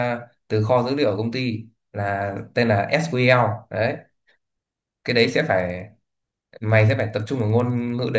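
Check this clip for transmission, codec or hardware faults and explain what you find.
One fault is present, in the last part of the clip. From 5.0 s to the end, the speech carries a resampler restarted on every block. Ticks repeat at 10 Hz, which fits 100 ms blocks. Each block was converted without its neighbours' samples, leaving a small error at every edge. The ticks are heard only while there is signal.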